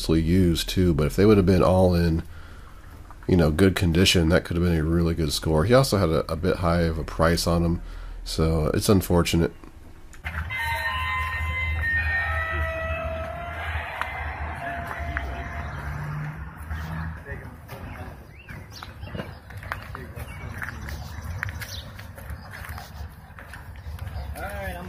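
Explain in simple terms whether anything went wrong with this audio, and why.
Nothing went wrong technically here: the signal holds steady throughout, with no breaks, glitches or distortion to be heard at any point.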